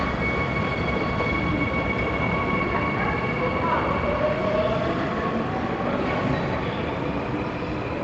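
No technical faults can be heard at any point in this audio.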